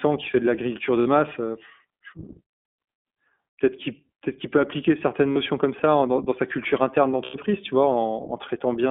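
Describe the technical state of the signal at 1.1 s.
The iLBC codec is squeezing the whole line into a narrow 200 Hz to 3.5 kHz band, running at 15.2 kbps. The speech sounds plainly rough and slightly synthetic.

Just before 1.1 s, iLBC frames were lost from 1.00 to 1.08 s, right after "qui fait de l'agriculture". That 60 ms gap fits three 20 ms frames. The decoder filled it by repeating the last pitch cycle mixed with noise, so it sounds like a short, held, buzzy vowel. Because iLBC frames stand alone, the speech recovers cleanly by 1.1 s.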